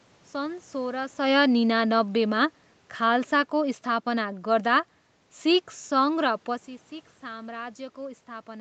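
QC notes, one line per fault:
1.18 to 4.89 s, automatic gain falling: the level sinks by about 5 dB over nearly four seconds as the gain control, having judged the input too loud or its background noise too strong, eases its gain down step by step. What separates this from a talker leaning back, as heard around 1 s and 6.5 s, is that the room noise drops along with the speech, because the whole signal is scaled, not just the source at the microphone.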